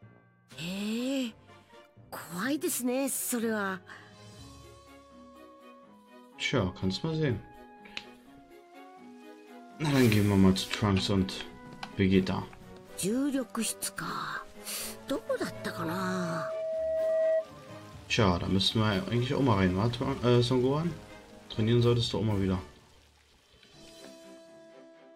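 From 15.38 s to 17.51 s there is loudspeaker feedback squeal: the microphone re-captures the speaker output and the loop gain passes unity at 644 Hz. That single tone swells over roughly two seconds, peaking around 5 dB above the surrounding sound.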